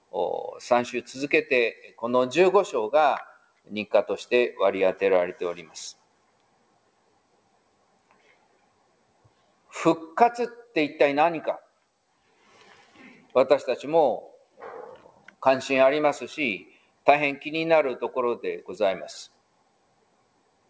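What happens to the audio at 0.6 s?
At 0.6 s the sound is coming out of a stretch where the noise suppressor cut it: from 0.0 to 0.6 s the suppressor treated this sound as noise and pulled it down by up to about 17 dB, over roughly a fifth of a second in total. Its steady, fading parts sink while sharper onsets hold on.

Underneath this, a noise suppressor tuned for speech is left on for music or sounds throughout the clip. It mistakes sustained tones and tails for noise and keeps turning them down, so the level swings by around 15 dB and the sound pumps and thins.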